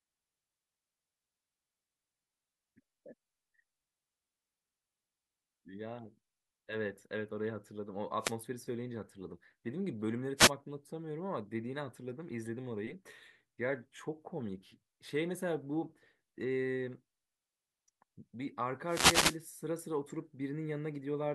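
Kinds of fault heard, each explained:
Wireless microphone noise hit: at 8.20, 10.36 and 18.87 s, bursts of static as the FM radio signal fades, letting receiver noise rise.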